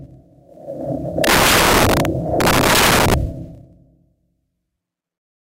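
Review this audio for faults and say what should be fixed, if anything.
Violent, harsh cracks hit the loud moments from 1.24 to 2.05 s and again from 2.41 to 3.14 s: integer overflow. Gain pushed peaks about 14 dB and about 12 dB past full scale, and instead of limiting, the samples wrapped to the opposite extreme. Clamp to the integer range before converting.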